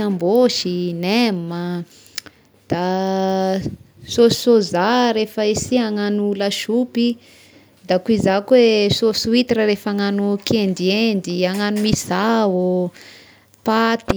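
A short stretch of recorded speech, and nothing technically wrong turns up in it at any point.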